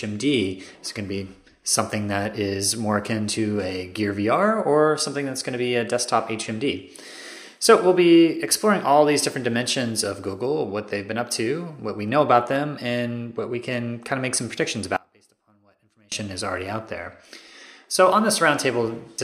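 At 14.97 s the audio drops out to a faint residue, and full level returns abruptly at 16.12 s, about 1.15 s later. In between, only a weak trace of the sound remains, around 30 dB below its normal level. The likely cause is a brief loss of the wanted signal while the path after the break stayed live. On a waveform the envelope collapses to a thin band with hard edges. A spectrogram shows a sharply bounded, much darker vertical stripe rather than a gradual fade.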